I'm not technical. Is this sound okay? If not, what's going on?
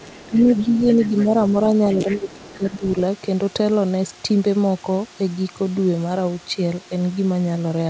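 No. Other side's voice leaking through, from 0.00 to 1.26 s, 2.10 to 2.33 s and 2.49 to 2.86 s: a second, fainter voice sits quietly under the talker. It was likely played on the talker's loudspeaker and picked up again by the microphone, and the echo canceller did not remove all of it.

Speech suppressed in double talk, from 0.05 to 0.98 s, 1.49 to 1.55 s and 1.92 to 2.83 s: the talker's voice dips while both sides speak. The likely cause is the echo canceller, which could not separate the two voices and turned both down.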